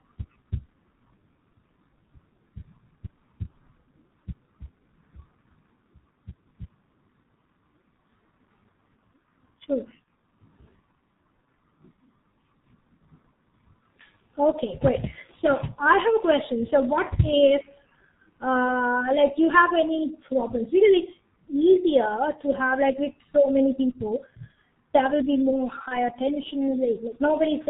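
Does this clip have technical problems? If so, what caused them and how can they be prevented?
Yes. The whole clip of speech carries heavy G.723.1 codec damage. Nothing passes above 4 kHz, so it sounds muffled and hoarse with smeared consonants, which fits a bitrate near 6.3 kbit/s. Use a wideband, higher-bitrate codec.

VoIP packet loss concealed by the speech codec hits at 10.04–10.07 s and at 25.88–25.99 s, after "there will be more". The decoder fills each gap with a fading extrapolation of its last pitch and filter, which points to one lost 30 ms frame each time. Reduce loss with a stable network and a jitter buffer.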